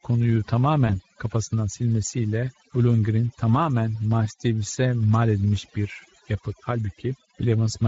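A speech recording carries two faults from start to finish. Overdone noise removal has pulled the background down to near silence with small twinkling specks, and quiet parts of the voice have been cut away with it. That sparkle in the gaps sets it apart from plain gating, which leaves a clean silence. Over this sits Speex codec damage that is plainly audible: a hoarse, noisy edge on voiced sound and a synthetic, noise-filled top end. The grain points to a middling Speex setting near 17 kbps rather than to noise removal. From 0.87 to 0.99 s, VoIP packet loss concealed by the speech codec shows as a brief stretched sound that fades. The dropout fits a single lost 20 ms frame, but the weak, distorted voice lingers for about 100 ms as the decoder recovers. A simple click or a hard gap would not linger like that.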